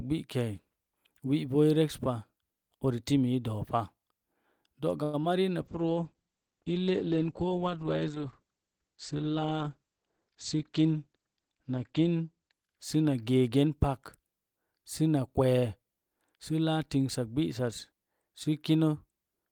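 At 5.03 to 5.15 s there is a call audio freeze: the last sound is stretched into a fading buzz for about 100 ms before the audio picks up where it stopped. The likely cause is delayed packets draining the jitter buffer. On a spectrogram this appears as smeared, decaying harmonics; the waveform shows no true silence.

Right after, from 5.21 to 5.25 s, comes a short concealed packet loss. About 33 ms of audio never arrived, and roughly 13 ms of that was patched by extending the preceding sound before blending back, leaving about 20 ms missing. It is heard as a brief smear or wobble, and shows as a small blurred patch in the spectrogram.

From 5.62 to 15.09 s a call bitrate drop takes the encoder from 32 to 9 kbps, with the low point lasting about 5.5 s. The audio turns rough and muffled. On a spectrogram the content above 8 kHz disappears, where it had reached 20 kHz, and the remaining detail looks coarse and blotchy.

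Within that stretch, from 10.03 to 10.95 s, a jitter buffer speed-up plays the audio at about 108% speed with pitch unchanged, cutting around 70 ms by removing short pitch-period slices. It sounds hurried. On the waveform, syllables look compressed.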